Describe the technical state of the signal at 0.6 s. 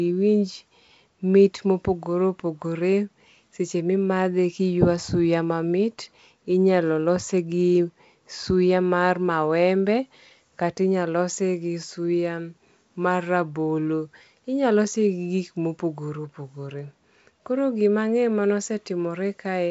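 At 0.6 s the speech is intact, with no fault present, only the ordinary sound of G.722 wideband telephone coding running normally, its band limit near 7.7 kHz and light coding hiss audible as usual.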